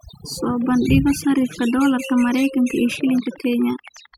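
Overdone noise removal runs throughout. Bands near the noise floor are cut away, so silences twinkle. From 2.92 to 4.15 s, a train of clicks ticks evenly, 11.5 per second, peaking slightly above the speech, likely from interference.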